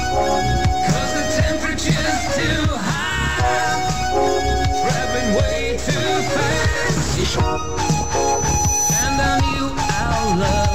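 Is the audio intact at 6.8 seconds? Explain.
Yes, the audio at 6.8 seconds is intact, with no dropout, click, distortion or other fault at that moment.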